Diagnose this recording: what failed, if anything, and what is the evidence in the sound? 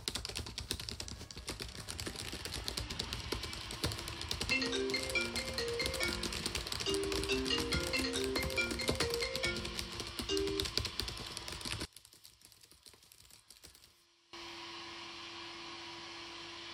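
From 11.85 s to 14.33 s the sound drops by about 19 dB, with the centre largely gone. The likely cause is one channel inverted in the analogue wiring, so material common to both channels cancels when summed to mono.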